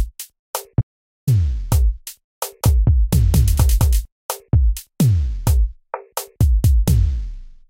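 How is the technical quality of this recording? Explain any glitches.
Two glitches stand out, one early and one in the middle.

From 0.81 to 1.27 s there's an audio dropout to silence. The sound cuts off dead for about 0.46 s, with no room tone at all. That's likely the input dropping out while the recorder kept writing, so that stretch is simply lost.

Between 2.63 and 4.05 s you get a doubled audio track: a second full-band copy trailing roughly a fifth of a second behind, at about the same level. It's dry, with no decay, and it switches in and out abruptly, likely a second, slower capture path being mixed in.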